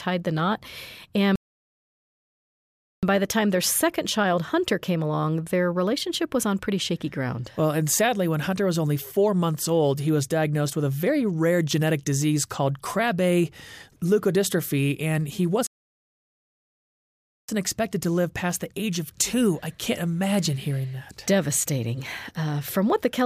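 Playback stalls twice, most likely because the player ran short of buffered data or its output thread was held up. From 1.36 to 3.03 s the sound cuts off mid-flow and the output falls silent for about 1.7 s before resuming. The same thing happens again from 15.67 to 17.49 s, a gap of about 1.8 s. Each time the audio stops abruptly rather than fading.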